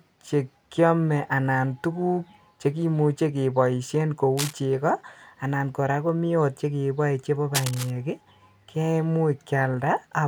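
At 4.37 to 4.54 s, just after "keboisien ko", a burst of cable scratch noise rustles over the speech. It returns at 7.55 to 7.91 s. Both bursts sit only slightly below the voice. A worn cable or connector being moved is the likely cause.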